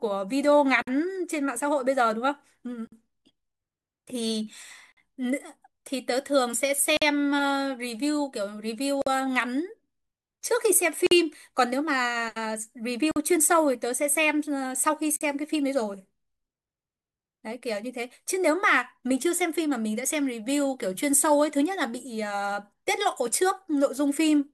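At 0.82 s the speech drops out for 52 ms. This is a gap at a join of encoded pieces. It returns at 2.87, 4.92, 6.97, 9.02, 11.07, 13.11 and 15.16 s, each gap 48 ms, roughly every 2 s. The audio was encoded in separate pieces and joined untrimmed. Each piece keeps its leading encoder delay and padded final frame. The result is a brief hole with smeared edges, after which the speech resumes where it stopped.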